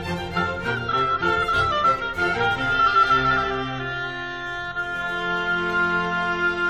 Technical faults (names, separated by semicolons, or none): none